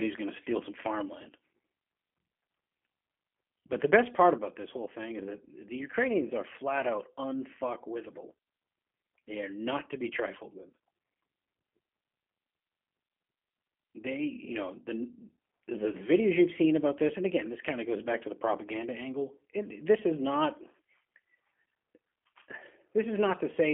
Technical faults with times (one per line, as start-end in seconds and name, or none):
0.00-23.73 G.729 codec